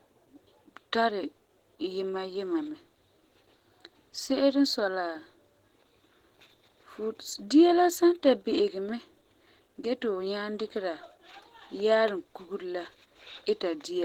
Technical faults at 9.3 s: Opus compression

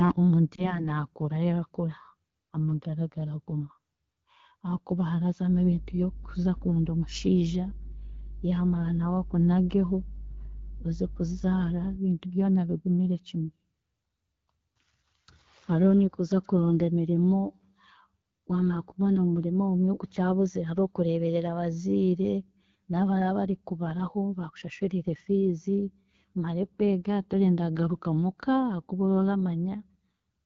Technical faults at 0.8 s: AMR wideband (HD Voice) codec; lost AMR speech frames

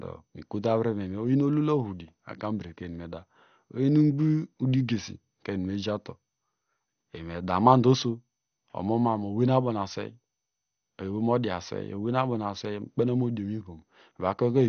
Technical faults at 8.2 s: MP2 compression

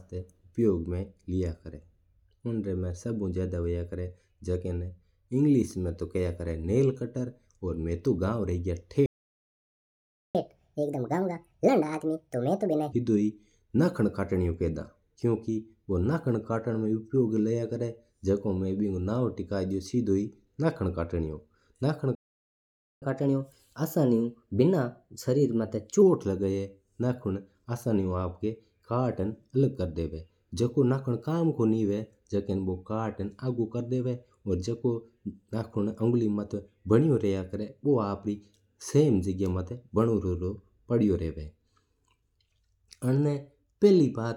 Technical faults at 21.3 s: none

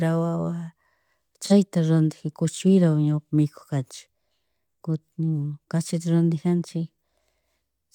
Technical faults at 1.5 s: AAC frame loss with concealment

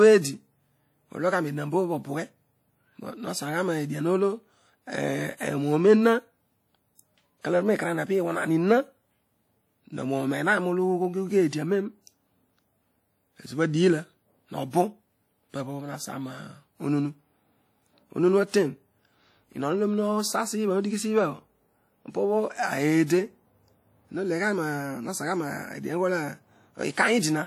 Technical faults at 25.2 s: WMA compression

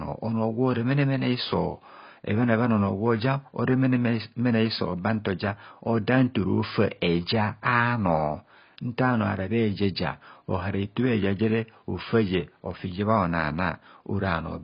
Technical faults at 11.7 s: AAC compression

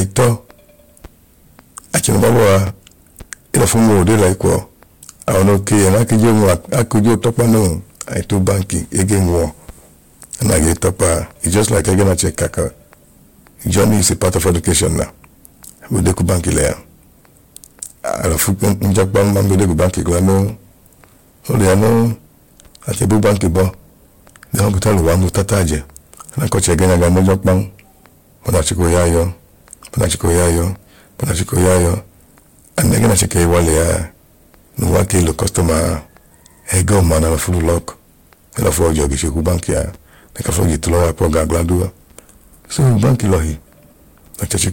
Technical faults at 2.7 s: hard clipping; Bluetooth stutter

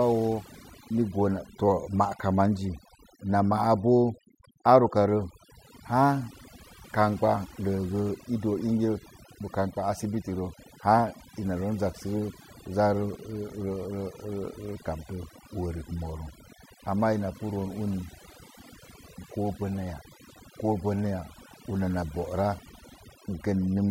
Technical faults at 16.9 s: overdone noise removal

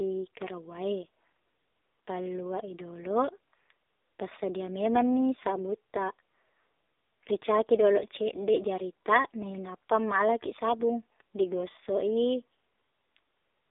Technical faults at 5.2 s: AMR narrowband mobile codec

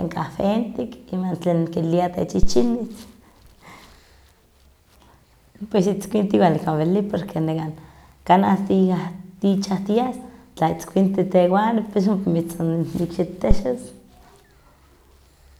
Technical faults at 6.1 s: none

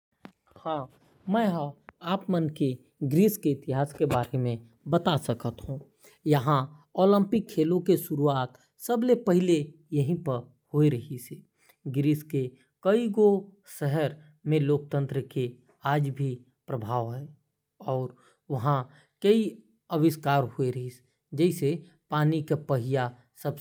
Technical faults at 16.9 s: none

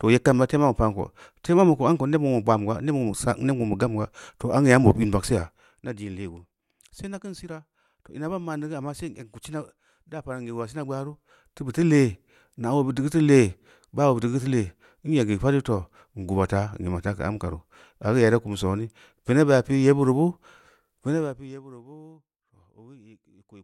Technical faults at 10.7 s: zipper noise

